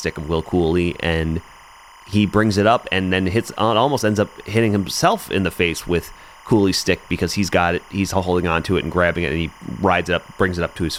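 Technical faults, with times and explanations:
Throughout, timecode bleed: a steady chirping warble sits behind the speech, about 25 dB below it, as a 25 frames-per-second linear timecode signal leaks in and flips between tones near 1 kHz and 2 kHz. A spectrogram shows constant bands at both frequencies, and the waveform carries a faint square-wave ripple.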